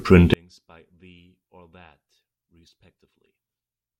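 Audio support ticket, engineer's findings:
Speech nearly vanishes in mono from 0.34 s to end, level down about 38 dB, faint residue. Likely one channel inverted; centred content cancels when summed.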